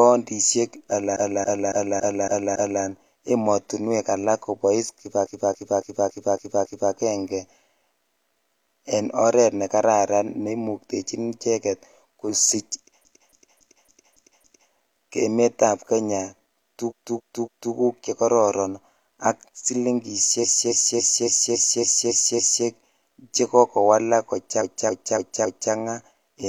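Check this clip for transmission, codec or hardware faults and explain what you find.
The speech contains six stutters caused by repeated frames. A 278.6 ms run of compressed frames was delivered several times in a row, so the decoder played the same stretch again at each pass. This is heard as a looping stutter, and each one lengthens the audio by the repeated time.

The stutters fall at:

1.12 to 2.79 s, with six extra plays, just before "emotinwek alak kobois".

5.21 to 6.88 s, with six extra plays.

13.01 to 14.68 s, with six extra plays.

16.86 to 17.70 s, with three extra plays, just before "chekororon ak".

20.39 to 22.62 s, with eight extra plays.

24.57 to 25.69 s, with four extra plays, right after "chekoko walak".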